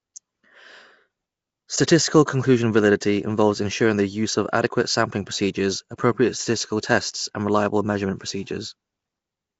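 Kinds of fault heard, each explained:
Nellymoser compression: A rough, hissy halo and a smeared, underwater quality sit on the speech throughout, with nothing above about 7.7 kHz. This is likely Flash's Nellymoser Asao codec at around 32 kbps, coding fixed blocks with two bits a sample and filling starved bands with noise.
Pre-echo: A brief hiss, about 11 ms long, comes at 3.00 s, just before "involves ensuring the use", softening the attack that follows. The codec spread quantisation noise across its whole block, so noise meant for the loud onset leaked into the quiet moment ahead of it.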